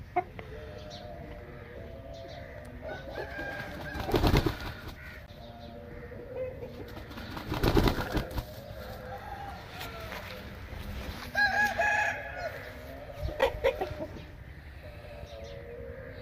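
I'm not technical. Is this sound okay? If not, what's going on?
No. There are three tiny dropouts, heard as a tick or very short hole at 5.26, 9.06 and 13.41 seconds. Each is a block of digital silence, where the sound briefly drops to nothing, because the program didn't deliver the next batch of audio in time. The one at 13.41 lasts about 11 ms, which fits a 512-sample buffer.

At 13.81 seconds there is a quick click or skip. This is an overlap between stream segments: the audio arrives in pieces, and two pieces claimed the same moment, so a few milliseconds were trimmed away and the sound jumps.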